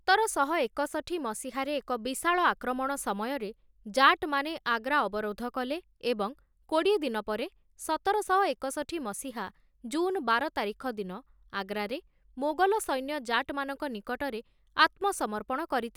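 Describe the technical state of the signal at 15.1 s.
At 15.1 s the signal is intact, with no audible dropout, clipping, distortion or other technical fault.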